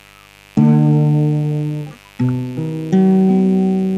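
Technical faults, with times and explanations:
Throughout, mains buzz: a steady, raspy buzz sits under the sound for the whole clip, roughly 30 dB below it, quiet but constantly present. Its rough edge comes from sharp spikes entering the signal twice per cycle of the 50 Hz supply. Such spikes, typical of a dimmer, a rectifier or a missing shield, carry harmonics of 50 Hz up into several kilohertz, so the interference is heard as a gritty rasp rather than a smooth, low hum.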